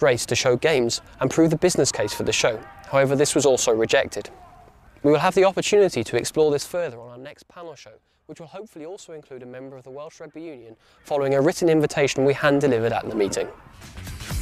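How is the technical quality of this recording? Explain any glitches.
The recording has zipper noise during two level changes. From 6.39 to 7.30 s the level drops about 20 dB, and from 10.59 to 11.41 s it rises about 20 dB. In each case the change moves in 2 dB steps, roughly ten a second, with no smoothing. Every jump leaves a small click, heard as a rapid ticking on the sound. A clean fader move would glide without any such clicks.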